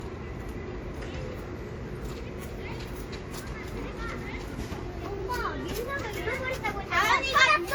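A recording of everyday sound with transcoding between lossy codecs throughout: two different sets of coding artefacts sit together, which points to a likely chain of roughly a 64 kbit/s WMA encode re-encoded as Opus near 48 kbit/s. Nothing remains above 20.1 kHz.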